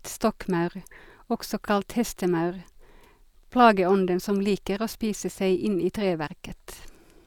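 No technical faults can be heard in this speech recording.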